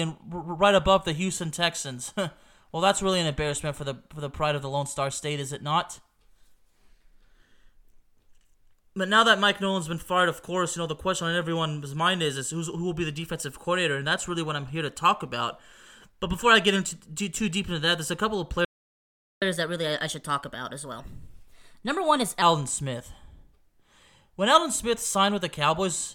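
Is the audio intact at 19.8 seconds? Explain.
No. From 19.42 to 22.42 s, just after "there's a couple of", the player does a catch-up at higher speed, resampling its backlog to 1.15x, so the speech runs faster and about two semitones higher. A spectrogram shows harmonics shifted upward and time-compressed until normal pitch resumes.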